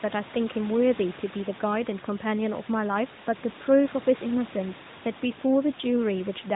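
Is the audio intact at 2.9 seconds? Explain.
Yes, the audio is intact at 2.9 seconds. The quiet room noise, about 18 dB below the speech, and the narrowband band limit near 3.8 kHz from the AMR-NB mobile codec are the normal character of this recording and its transmission path.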